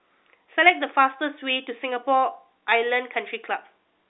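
Nothing stood out on listening to this speech, which comes across as ordinary telephone-line audio.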